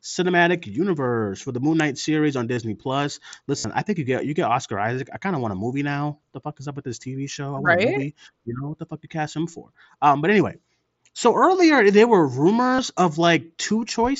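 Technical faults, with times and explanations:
2.54–2.57 s, 3.58–3.64 s and 12.76–12.79 s: concealed Bluetooth headset packet loss, where headset packets dropped after "series on", before "I think you get" and after "so earlier there were". The receiver patched each gap by looping a recent slice of the waveform, which gives a brief buzzy fill of about 30 ms, or 60 ms at 3.6 s, and a slight warble as the real mSBC audio resumes.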